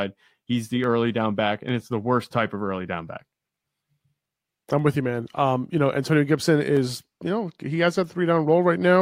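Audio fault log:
0.84–8.74 s, clock drift buffer slips: likely two clocks about 200 ppm apart, dropping or repeating a few samples every 0.99 s, heard as regular clicks.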